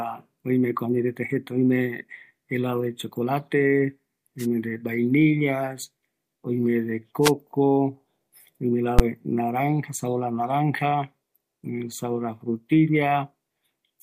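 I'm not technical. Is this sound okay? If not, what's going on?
No. Twice, the radio signal from the wireless microphone briefly faded as reflections cancelled it out, letting the receiver's own noise through. That's the wireless microphone noise hit: short bursts of static swishing over the speech at 4.38 to 4.46 s and 7.22 to 7.32 s.

At 8.99 s, a calculation went wrong and produced invalid numbers, which were forced to the loudest possible value for a tiny slice of audio. That's invalid numbers at full scale, heard as a single sharp, very loud bang.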